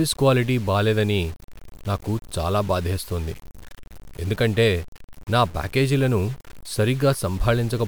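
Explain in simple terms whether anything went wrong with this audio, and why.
Throughout the speech, quiet moments sound gritty and sputtery. The likely cause is low bit depth without dither: too few volume steps, consistent with about seven bits.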